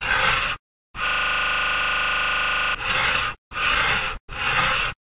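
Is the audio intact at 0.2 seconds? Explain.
Yes, at 0.2 seconds the sound is intact, carried through a WebRTC call path whose G.711 mu-law coding leaves nothing above 4 kHz.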